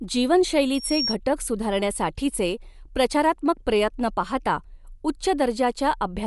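A speech recording with a breathy, grainy top end throughout and no energy above 11.5 kHz, likely from Bluetooth LC3 compression; a spectrogram shows a hard ceiling with speckled noise-filled patches below it. A loudspeaker feedback squeal at 5.5 kHz swells over about a third of a second from 0.74 s, stops at 1.16 s, and rivals the speech in level, appearing as a bright horizontal line on the spectrogram.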